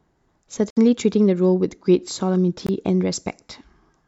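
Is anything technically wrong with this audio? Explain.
Yes. The speech drops out twice, from 0.70 to 0.78 s and from 2.67 to 2.70 s, likely a Bluetooth dropout: packets arrived late and were discarded, so output fell silent, then resumed further along. Waveform and spectrogram show abrupt, flat, empty gaps.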